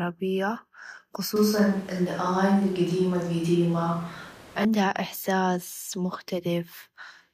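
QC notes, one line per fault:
1.36–4.65 s, switch to a distant microphone: the speech turns abruptly roomy and hollow, thinner in the bass, with background noise rising to roughly 25 dB below the speech, then snaps back. Loudness barely changes, likely from a far microphone substituting for the close one. Added reverb alone would not lift the noise floor.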